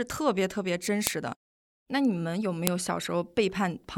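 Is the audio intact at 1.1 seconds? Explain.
No. At 1.07 s a file header played as audio: a joined piece's header bytes are read as samples, giving a loud, sharp snap, unlike a splice click, which depends on the waveform.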